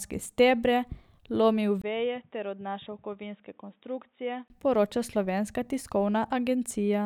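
Speech, with a short 20 ms gap at 1.82 s where the sound drops about 10 dB, turns boxy with nothing above 3.8 kHz and a faint new noise floor, then recovers at 4.5 s. This most likely reflects an input switched to a poorer device.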